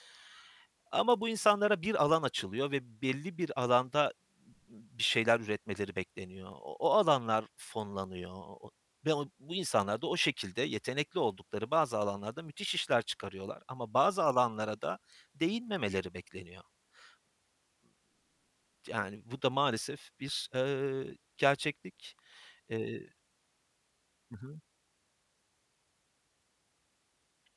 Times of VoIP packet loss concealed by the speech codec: none

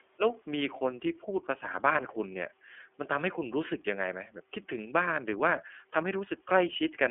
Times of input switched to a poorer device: none

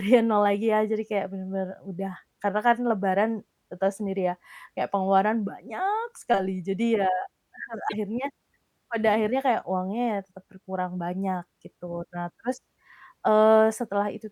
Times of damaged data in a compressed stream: 7.85-7.94

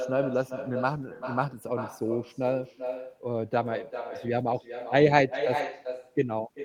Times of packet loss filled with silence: none

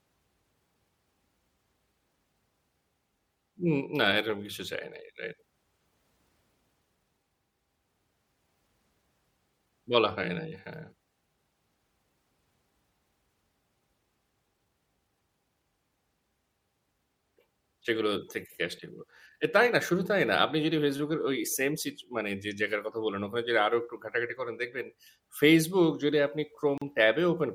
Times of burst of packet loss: none

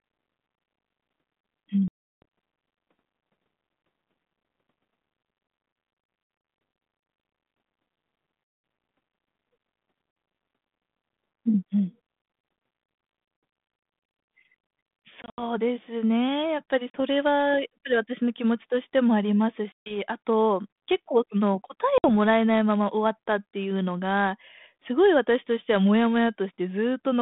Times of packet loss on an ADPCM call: 1.88-2.23, 8.44-8.64, 10.12-10.16, 15.22-15.43, 16.90-17.01, 19.72-19.98, 21.98-22.10

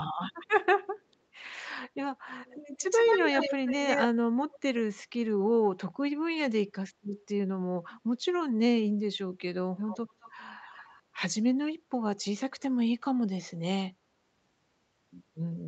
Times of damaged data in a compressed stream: none

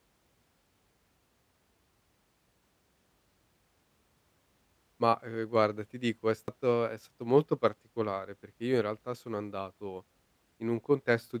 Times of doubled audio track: none

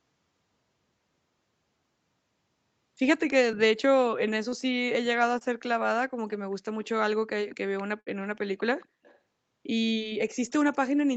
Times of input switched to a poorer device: none

